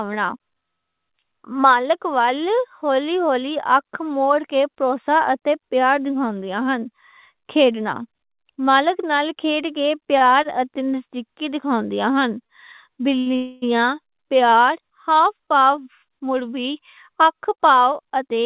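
Speech over a call line, band-limited to nothing above 4 kHz as you'd expect from G.711 mu-law, with a run of timing trouble in the back half. First come four short stalls from a late packet, at 10.18, 10.43, 12.47 and 13.19 s. Each time the next packet wasn't there when due, the jitter buffer ran dry, and the receiver stretched the last bit of sound for 26, 20, 22 and then 71 ms until the data showed up. Nothing is lost, but the sound hangs a beat too long with a slight buzzy smear. Right after that, from 13.36 to 13.64 s, there's a proper call audio freeze. The last sound gets drawn out as a fading buzz for about 260 ms, never quite dropping to silence, and then the audio picks up exactly where it stopped. That's likely packets held up in transit long enough to empty the buffer outright, so a gap gets inserted rather than anything going missing. All those stalls leave the buffer holding more delay than it wants, and from 15.36 s to 18.37 s you hear the jitter buffer speed-up clawing it back. 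The receiver snips out tiny pitch-period-sized slices over and over, running things at about 109% speed with the pitch unchanged. Over those three seconds it trims roughly a third of a second, so the tail end sounds slightly rushed.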